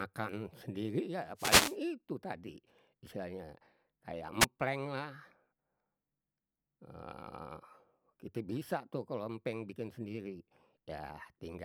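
At 1.36 s a wireless microphone noise hit breaks into the speech. It lasts until 1.77 s. The radio link from the microphone fades, so the receiver's own noise rises over the signal. It sounds like a swish of static laid across the voice. A second, shorter hit comes from 4.40 to 4.45 s. This one is a brief burst of static, lasting about 50 ms.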